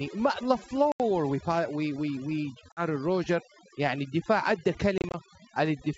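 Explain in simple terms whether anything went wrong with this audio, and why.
A couple of things went wrong. The whole clip has overdone noise removal: the cleanup was set too aggressively, so the background drops and breaks up into little twinkly specks.

There's also packet loss on an ADPCM call. Chunks of the call dropped out and were replaced by silence, at 0.92 to 1.01 s (about 80 ms missing), 2.72 to 2.83 s (about 50 ms), and 4.98 to 5.16 s (about 90 ms scattered in short bursts). The decoder loses track after each gap, so the speech returns slightly distorted before settling. The wideband phone coding itself sounds clean.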